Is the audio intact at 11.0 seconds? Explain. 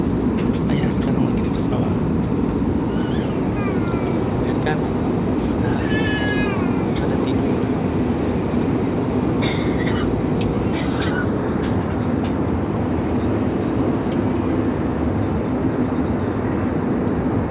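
Yes, the audio is intact at 11.0 seconds, with nothing at that point that breaks or disturbs the sound.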